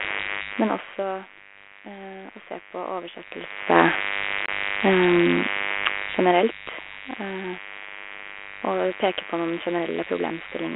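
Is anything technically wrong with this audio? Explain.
Yes, there are three problems.

The first is a mains buzz that runs the whole way through. It's a steady, raspy 50 Hz buzz, sitting only about 20 dB below the speech. That harshness comes from sharp switching spikes getting in, probably through a dimmer, a rectifier or a missing shield, and hitting twice per mains cycle. Those spikes spread harmonics of 50 Hz well up into the kilohertz range, which is why it rasps rather than hums.

The second is packet loss on an ADPCM call, from 4.46 to 4.49 s. About 20 ms of audio drops out, which sounds like one lost packet, and it's replaced by a hard-edged hole of silence. The narrowband line sound fits G.726 at 32 kbit/s. With that kind of coding the decoder's adaptive predictor and step size lose track of the sender during the gap. So when the speech comes back it's slightly distorted before it settles.

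The third is zipper noise, between 5.89 and 6.57 s. The level drops by about 10 dB there, but it gets there in 1 dB jumps at roughly ten steps a second instead of gliding down. Nothing smooths the transitions, so each jump leaves a small click. Together they make a ticking, zipping texture riding on the speech for as long as the level is moving.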